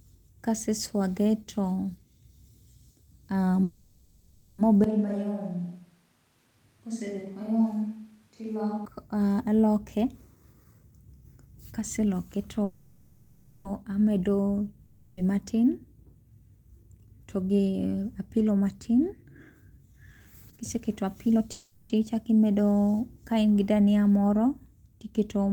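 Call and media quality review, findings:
Call audio freeze, 3.63–4.60 s, 12.64–13.67 s, 21.52–21.92 s: last sound stretched into a decaying buzz, then speech resumes intact. Likely jitter buffer underrun. Spectrogram shows smeared harmonics fading.

Switch to a distant microphone, 4.84–8.85 s: abrupt hollow, roomy speech, about 5 dB quieter, room noise about 40 dB below speech. Likely close-mic path lost. Waveform steps down, reverb tails visible.

Jitter buffer speed-up, 9.96–12.63 s (117%), 16.83–19.14 s (108%), 19.55–21.41 s (120%): hurried speech at unchanged pitch as pitch-period chunks are cut to drain excess buffer. Compressed syllable spacing, harmonics unshifted.

Long network dropout, 14.85–15.19 s: 0.32 s lost, bridged by a fading buzz, speech resumes further on. Likely packet loss. Spectrogram shows a blurred, decaying band, then an abrupt restart.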